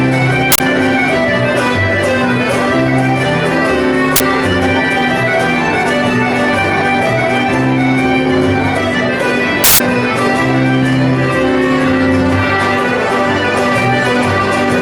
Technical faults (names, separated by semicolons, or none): uninitialised buffer